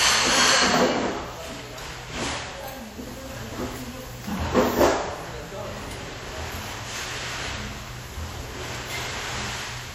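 Sounds, with WMA compression damage plainly audible throughout: washy, ringing texture and breathing hiss, nothing above 19.8 kHz, likely from a low-bitrate encode around 48 kbps.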